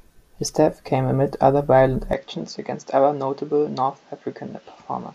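At 2.13 s the recording likely switched to a poorer input device, which stays in use to the end. From that moment the speech loses everything above 7.6 kHz, drops about 5 dB in level, and carries a faint new background noise, with no gap at the switch.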